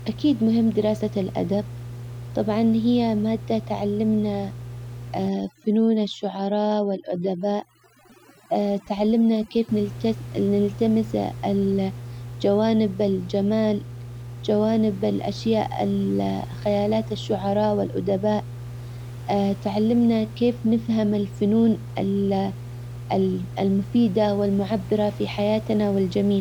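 A speech recording with mains hum running throughout: a steady 60 Hz tone, fairly strong relative to the speech, from a ground loop or nearby transformer, visible on a spectrogram as an unbroken horizontal line with some low harmonics above. From 5.28 to 9.69 s, overdone noise removal leaves twinkling specks between phrases; the spectrogram shows patchy, blacked-out bands there.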